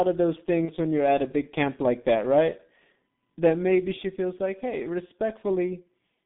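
From the outset the speech sounds muffled and hoarse, with blurred consonants and a band limited to roughly 150 Hz to 3.7 kHz. This is the G.723.1 codec under heavy strain. Its 30 ms frames and slowly updated voice model, at a rate that fits about 6.3 kbit/s, strip away much of the detail.

Between 0.65 s and 0.71 s the sound briefly turns stretched and weakens before it clears. This is VoIP packet loss concealed by the speech codec. About 30 ms of audio, consistent with a single lost frame, was rebuilt from the previous pitch and filter with falling gain, and the following frame took a moment to recover.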